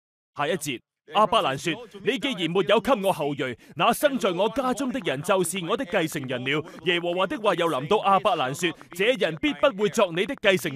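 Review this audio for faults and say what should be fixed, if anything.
From 4.46 s right through to 10.72 s there's a train of clicks riding on top of the sound: sharp, same-shaped ticks at a steady 8.96 per second, around fifty of them, and they're about as loud as the program itself, so they cut through the quieter stretches too. That regularity points to something periodic injecting pulses, most likely interference from nearby gear or a faulty connection or power supply. Worth checking grounding, cable routing and interface buffer settings, and keeping noisy equipment away from the signal chain.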